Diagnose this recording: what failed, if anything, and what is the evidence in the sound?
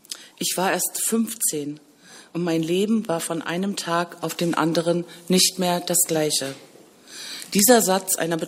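Nothing stood out on listening that would point to a failure at any stage of the chain.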